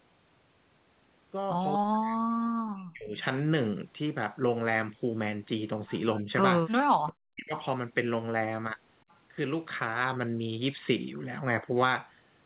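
From 1.78 to 3.18 s, 6.21 to 6.29 s and 6.81 to 7.54 s the sound dips by up to about 40 dB, likely speech suppressed in double talk. The canceller is pulling the talker down along with the far side.

Brief delayed copies follow at 3.20 to 3.24 s, 7.59 to 7.64 s and 9.09 to 9.15 s. They are likely echo leak, lagging 243 to 403 ms and sitting about 25 to 40 dB below the voice.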